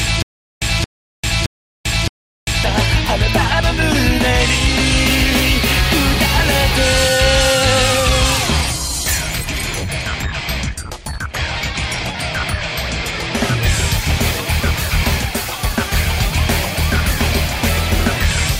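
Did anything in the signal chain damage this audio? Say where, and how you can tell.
Yes, at playback. From the first instant to 2.64 s there is a stutter with silent gaps, already under way at the start. A 223 ms burst repeats four times, each followed by about 395 ms of digital silence, every 618 ms. This likely comes from a stalled stream replaying its last fragment on each retry. The audio due in that span is lost.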